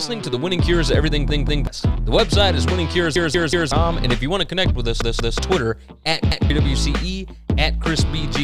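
A repeated buffer stutters the sound four times: at 1.30 to 1.67 s and 5.02 to 5.39 s the same roughly 186 ms piece plays two extra times, at 3.16 to 3.72 s three extra times, and at 6.32 to 6.50 s once. Each repeat is an exact copy with a hard join, which fits an 8192-sample buffer. That sets it apart from a dropout's silence or a smeared concealment. About 0.4, 0.5, 0.4 and 0.2 s of new audio go missing in turn.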